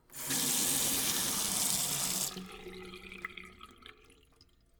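From 0.6 to 1.78 s the processor falls behind its audio deadlines, producing processor overload crackle. Buffers of around 5 ms are repeatedly not ready in time, and around 50 of them are filled with stale audio held over from an earlier buffer. Each of those stale fragments meets the live signal with a hard edge, so the sound is overlaid with a gritty tearing crackle that ends abruptly once the load eases.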